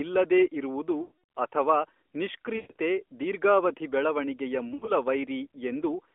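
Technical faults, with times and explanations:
1.02–1.12 s (after "ಇಲ್ಲದೇ ಇರುವುದು"), 2.56–2.76 s (before "ದೀರ್ಘಾವಧಿ ಬೆಳವಣಿಗೆಯ") and 4.68–4.92 s (after "ದೀರ್ಘಾವಧಿ ಬೆಳವಣಿಗೆಯ"): lost AMR speech frames. Radio errors corrupted the frames, so the decoder reused the last good pitch and vocal-tract settings at falling gain. The voice smears and warbles, sinks toward silence during the longer runs, then returns briefly rough.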